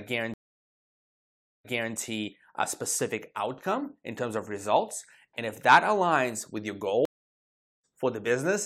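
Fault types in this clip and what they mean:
Stream reconnect: after silences of 1.3 s and 0.78 s, the speech restarts out of place, first repeating 0.3 s, then skipping about as much, unlike a simple dropout.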